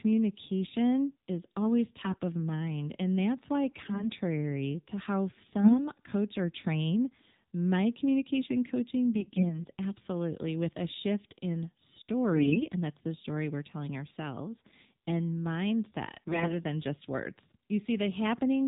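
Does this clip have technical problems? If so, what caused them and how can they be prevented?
Yes. The whole clip runs through the AMR narrowband mobile codec, so everything above 4 kHz is gone and the speech has that buzzy, synthetic edge. The codec's vocal-tract model only gets a handful of pulses per short sub-frame to rebuild the sound, and the damage here is plainly audible, which fits one of the lower AMR modes, around 7.4 kbps. To avoid it, keep the call on a wideband or higher-rate codec, or record locally instead of over a phone link.

On top of that there are AMR bit errors at 2.02–2.20 s, 3.69–4.10 s right after "that's why", 5.59–5.87 s, 9.16–9.65 s, 12.32–12.67 s just before "and that's the story", and 16.28–16.53 s just before "than just words". In each stretch the pitch and level hold roughly steady but the sound goes hoarse, scratchy and gargly. That happens when the weakly protected bits in the frames arrive flipped while the checksum on the critical bits still passes. 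The pulses driving the model land in the wrong spots, and the fine pitch, gain and spectral values drift. The error rate sounds like a few percent, up to maybe 10% in the last burst. A stronger radio link or better channel coding prevents it, and so does discarding and concealing damaged frames rather than decoding them.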